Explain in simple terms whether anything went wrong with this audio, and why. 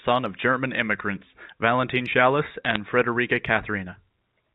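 Something did go wrong, briefly. From 2.65 to 2.78 seconds there is a short burst of crackle. These are bit errors on a digital phone line. The call is sent as a stream of ones and zeros. A few of those got flipped, roughly a handful in every thousand. Each flipped bit spoils one tiny slice of sound. When it hits an important bit, you hear a sharp tick. Several together make crackle over the speech, which carries on unchanged underneath.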